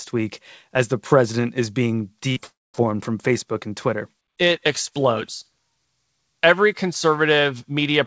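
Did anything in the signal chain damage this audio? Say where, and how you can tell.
Yes, in the network stage, on what sounds like a G.722 call path with nothing above 8 kHz. Just after "the president is being", from 2.32 to 2.38 s, there is short concealed packet loss. About 40 ms of audio never reached the decoder in time, and the receiver covered it by extending the preceding sound before blending back, which produces a brief smear. Unlike a true dropout, nothing is silenced and the audio resumes almost at once.

A longer gap follows at 2.46 s, lasting until 2.76 s. The last sound carries on as a fading synthetic tail, then gives way to about 210 ms of silence before the audio returns without the missing portion. This is likely a long network dropout, with roughly 280 ms never delivered. What separates it from concealed packet loss is the silent stretch after the concealment runs out, and what separates it from an edit is that fading tail.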